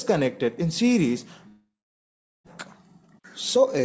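From 1.48 to 2.48 s the audio drops out: the last sound gets dragged on as a buzz or hiss that fades away into silence, and when things resume about 0.62 s of material is simply gone, most likely a long network dropout where the receiver papered over the gap. Then from 3.02 to 3.80 s there's a jitter buffer speed-up, running at 129% speed with the pitch unchanged, so it sounds rushed. The receiver is snipping out tiny pitch-period chunks, around a fifth of a second in total, to drain the delay that built up. Everything sits below 8 kHz, consistent with a G.722 call path at 64 kbps.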